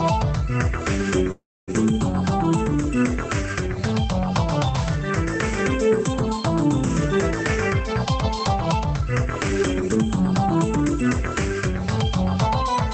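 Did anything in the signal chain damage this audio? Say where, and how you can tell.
Yes. The network and jitter buffer stage of the call path caused a call audio freeze from 1.31 to 1.70 s. The last sound carries on as a decaying buzz or hiss. Then about 0.27 s of silence follows. The audio resumes exactly where it stopped. Nothing is lost, but the playout now runs about 0.36 s later. This pattern points to packets that were likely held up in the network. The jitter buffer ran dry and the receiver filled the wait.

The same buffer then causes jitter buffer speed-up to recover the delay. From 7.93 to 8.14 s the sound plays at 117 percent speed, which trims roughly 40 ms. From 8.68 to 11.25 s it plays at 108 percent, which trims about 200 ms more. The pitch stays the same, but events arrive hurried and closer together. The receiver cut short pitch-period pieces again and again. Through all of this, the Opus coding and the band limit near 8 kHz are present. 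These fit a 24 kbps call setting.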